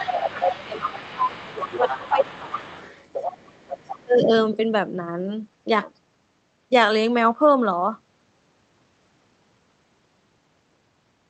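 From the start to 2.65 s, the talker's speech is suppressed in double talk. The level dips by roughly 15 dB across about two seconds. The echo canceller likely could not separate near and far talkers, so it ducked both.

Starting at the same time, from 0.0 to 4.04 s, the other side's voice leaks through underneath. It sits roughly 15 dB below the talker. This is likely loudspeaker playback that the echo canceller failed to fully remove from the microphone.

At 4.04 to 4.31 s, speech suppression in double talk returns briefly. The sound drops by roughly 20 dB for about a third of a second. The canceller likely clamped down again as the two voices overlapped, all heard through a call path limited to about 8 kHz.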